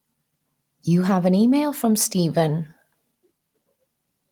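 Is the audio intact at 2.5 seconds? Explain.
Yes, the audio is intact at 2.5 seconds, with no dropout, glitch or other fault at that point.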